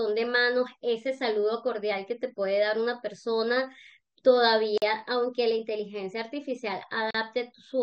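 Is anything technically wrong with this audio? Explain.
Yes, the speech has two gaps at joins of encoded pieces, at 4.78 to 4.82 s (about 43 ms) and 7.11 to 7.15 s (about 39 ms). The pieces were joined without trimming encoder delay and last-frame padding, so silence breaks the sound, which then resumes where it stopped. Each gap shows as a flat stretch in the waveform and a blank vertical stripe on a spectrogram, with smeared edges.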